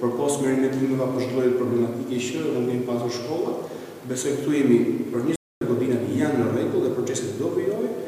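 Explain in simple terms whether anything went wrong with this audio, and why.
A playback stall at 5.36 s: the player most likely ran short of data or was briefly held up, so for about a quarter of a second, until 5.61 s, the sound drops to silence mid-flow before carrying on again.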